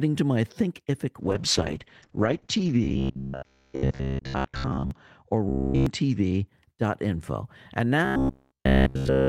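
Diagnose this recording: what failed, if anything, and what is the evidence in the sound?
The failure is in the codec, driven by a call bitrate drop. From 1.2 to 6.53 s the sound loses its top end and turns coarse and muffled. The bandwidth estimate fell, so the encoder was given far fewer bits. The rate went from 32 kbps to 8 kbps and stayed at its lowest for 1.28 s. At that rate the coded band shrinks from 20 kHz to 8 kHz, and detail smears.

There is also robotic sound from repeated short buffers. This is at the buffer stage, most likely fed by late network audio. A rigid, metallic buzz at 66.7 Hz appears from 2.84 to 4.91 s, from 5.49 to 5.86 s, and from 8.05 to 9.28 s. The first stretch is mostly repeats. The later two are repeats throughout. The cause is likely a 15 ms chunk replayed while real audio is skipped, which forces that fixed pitch.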